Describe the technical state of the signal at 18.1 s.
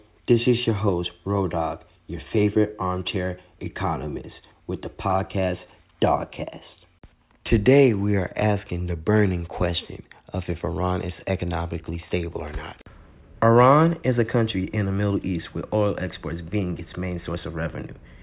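At 18.1 s the speech signal is intact, with no audible technical fault at that moment.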